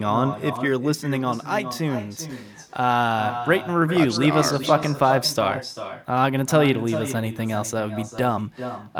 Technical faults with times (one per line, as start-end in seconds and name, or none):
0.00-8.99 echo with no canceller